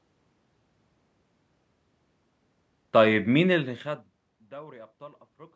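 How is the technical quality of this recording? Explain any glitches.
There is one technical fault, an automatic gain fall. From 2.97 to 4.71 s the gain control judges the input too loud, or its background noise too strong, and eases its gain down by about 5 dB, so the speech and the room noise behind it sink together.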